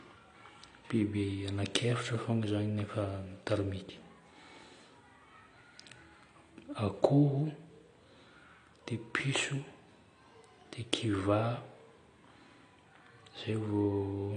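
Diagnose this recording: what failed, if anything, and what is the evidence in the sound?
The codec stage is where this went wrong: the speech has plainly audible AAC compression running the whole way through. Nothing survives above about 10.1 kHz, so the top end is shelved off and everything sounds dull, with a smeared, swirly texture on sustained sounds and sibilants. That's likely AAC-LC squeezed hard: it drops the cut-off and starves the remaining bands of bits, which fits something around 32 kbps.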